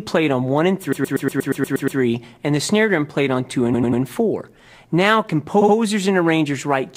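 Repeated frames: short blocks of compressed audio were decoded again at 0.92 to 1.99 s, 3.73 to 4.01 s and 5.60 to 5.74 s, producing looping stutters that lengthen the audio.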